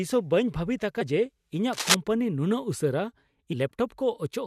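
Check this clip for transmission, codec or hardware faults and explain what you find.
Two kinds of fault turn up in the speech here: a couple of spots of damaged data in the compressed stream, and a short patch of cable scratch noise.

The damaged data hits at about 1.00 s and again at 3.52 s. Part of the compressed stream was corrupted, so the decoder misreads those frames, loses sync and hunts for the next frame header. You hear a brief glitch each time.

The cable scratch noise runs from 1.73 to 1.95 s. It's a dense, uneven rustle sitting a little louder than the speech. That's likely a worn cable, connector or control being moved, with its contact resistance jumping around and spraying noise bursts into the signal.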